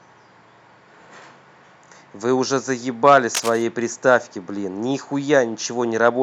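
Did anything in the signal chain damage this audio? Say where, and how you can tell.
Yes: cable scratch noise from the analogue wiring, 3.34 to 3.64 s. A dense, uneven rustle about 10 dB under the speech, likely from a worn connector's fluctuating contact resistance.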